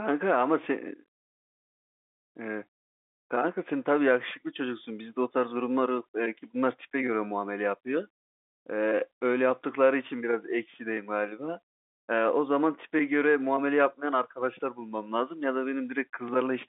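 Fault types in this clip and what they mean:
None found; this speech recording has no audible faults.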